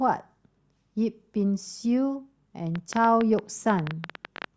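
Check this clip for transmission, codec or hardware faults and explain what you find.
A train of clicks runs from 2.76 to 4.45 s: about twenty similar ticks, roughly ten per second at uneven spacing, peaking about 10 dB above the speech. The likely source is interference or a struggling interface injecting repeated pulses.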